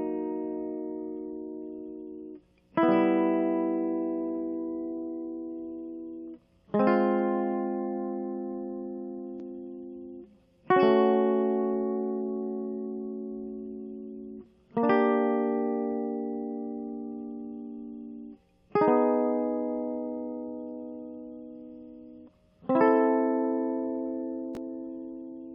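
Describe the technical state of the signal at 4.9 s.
Around 4.9 s the music runs intact, with no dropout, distortion or other fault in the signal at that point.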